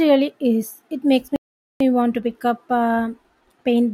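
Speech that cuts out abruptly at 1.36 s and stays silent until 1.80 s, a gap of about 0.44 s, before resuming with "want to pick up". This is a playback stall: the output simply goes dead mid-flow rather than fading or glitching, then picks up again. The likely cause is the player running short of buffered data or having its audio thread blocked, so nothing reached the output until it recovered.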